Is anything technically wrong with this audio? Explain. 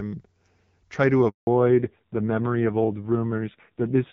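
Yes. There are two faults.

A handover gap runs from 1.29 to 1.47 s. The call switched networks, and no speech frames arrived for about 180 ms. The speech fades out within a few tens of milliseconds. It stays silent until the new link starts. Anything said in that gap is lost.

A fallback to narrowband follows at 1.47 s and lasts to the end. Before the gap, the HD Voice (AMR wideband) codec sounds clear, with only light coding damage. After it, nothing remains above 4 kHz. The speech turns dull and rough, which fits a low-rate narrowband codec at around 5.9 kbit/s.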